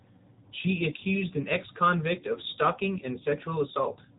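AMR narrowband mobile codec damage runs through the whole speech clip. The speech has been squeezed through a 20 ms frame coder whose synthetic, buzzy quality fits a rate near 8 kbps. It keeps only a coarse vocal-tract model and a handful of excitation pulses, and everything above about 3.8 kHz is gone, leaving a dull, telephone-band sound.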